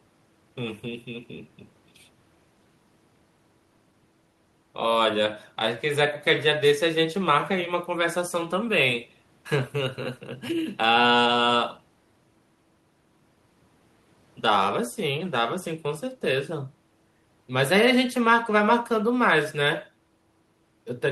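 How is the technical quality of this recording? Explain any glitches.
No glitches are audible anywhere in this recording.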